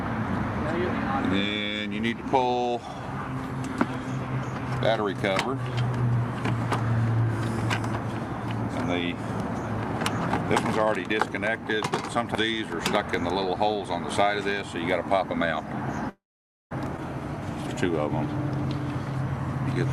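At 16.09 to 16.73 s the audio shows a call audio freeze: the last sound is briefly carried on and then goes silent for about half a second. It resumes exactly where it stopped, adding 0.61 s of delay. The likely cause is delayed packets emptying the jitter buffer. At 16.97 to 17.00 s comes a skip ahead, with only a tiny 12 ms gap. Roughly 0.4 s of audio is dropped and the two sides are joined almost directly, so material is lost rather than delayed.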